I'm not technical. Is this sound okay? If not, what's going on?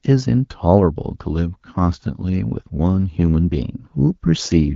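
Yes, nothing is wrong here.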